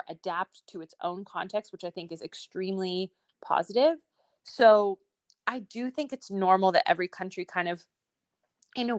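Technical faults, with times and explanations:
0.23 to 4.03 s, automatic gain rising: The level climbs steadily by about 5 dB over nearly four seconds, and the speech and the background noise swell together. The automatic gain control judged the incoming speech too quiet and raised its gain in small steps rather than all at once. Because the gain applies to the whole signal, the room noise rises with the speech, which gives the slow, even swell.
4.51 to 5.27 s, scattered short gaps: Within this stretch there are about seven brief hiccups, each no longer than around 15 ms, adding up to roughly 50 ms, or about 7 percent of the span. Packets arrived late or not at all, one at a time. The receiver filled each small hole by extending the sound just before it. No audio drops out completely, but each patch is heard as a brief tick or smear.
5.36 to 6.32 s, jitter buffer slow-down: Just before "normal that every country", the speech drags slightly, running at about 97 percent of normal speed with 39 ms added, while the pitch stays the same. 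The jitter buffer was building up a reserve of audio. To do this, the receiver repeated single pitch periods and small slices of pause several times in a row. This stretches the sounds without lowering the pitch, so they come out a little drawn out.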